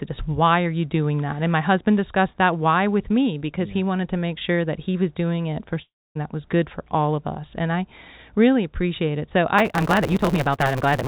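At 5.82 s, after "was doing it for", a fading buzz decays into silence until "that was good for" at 6.17 s, likely a long network dropout.

From 9.58 s onward, a block size mismatch (truncated) drops each block's tail, giving a 138 Hz buzz and 1.6-times-fast audio, which fits 512-sample writes.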